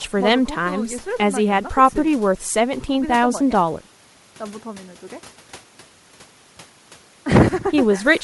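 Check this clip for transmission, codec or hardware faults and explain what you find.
One codec fault runs through the speech from start to end, and the likely cause is Bluetooth LC3 compression. The LE Audio transform codec works in short frames, consistent with a 7.5 ms setting, and at a rate that fits roughly 48 kbps it discards much of the upper spectrum and refills it with synthetic noise. The damage is plainly audible: the speech carries a breathy, grainy edge where its high-frequency detail should be.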